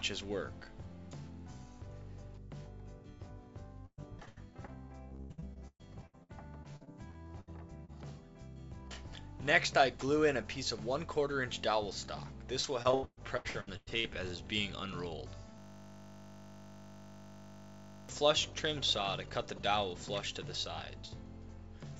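From 3.86 to 4.70 s, 5.09 to 7.49 s and 12.60 to 14.06 s, the sound turns choppy and robotic. This is repeated packet loss. Audio kept arriving late or not at all, and each hole was patched by stretching the last sound. Gaps reach about 0.12 s. Concealment fills roughly a quarter of the first two stretches and over 40% of the third.

At 7.85 to 7.90 s there is a brief smear. This is short concealed packet loss. About 40 ms never arrived in time. The receiver filled it by continuing the preceding sound, then blended back in.

From 15.58 to 18.09 s a steady 50 Hz buzz replaces the sound. This is a system hang loop. The system froze while the hardware replayed one 20 ms piece of its buffer, 125 times over. The band also stops at 8 kHz throughout, as a G.722 call codec would produce.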